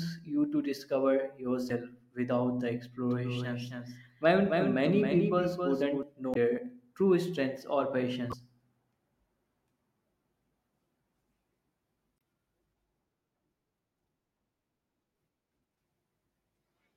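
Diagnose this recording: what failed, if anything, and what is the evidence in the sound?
At the codec stage there is damaged data in the compressed stream. At 1.67–1.71, 6.33–6.37, 8.29–8.33 and 12.16–12.18 s the decoder hits corrupted frames, loses sync and hunts for the next frame header. Each spot is heard as a brief chirp or blip breaking through the speech.

From 3.11 to 6.03 s there is a doubled audio track, likely from an edit or a second, slower capture path mixing in another copy. A dry, full-band duplicate trails the speech by roughly 300 ms at about 5 dB lower, with no room colour. It begins and ends abruptly at those points.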